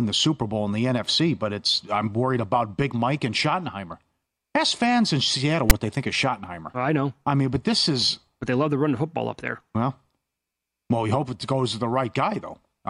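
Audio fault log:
5.70 s, file tags played as audio: a block of text tags was decoded as samples, giving a brief, hard-edged, one-sided rasp just before "they think of".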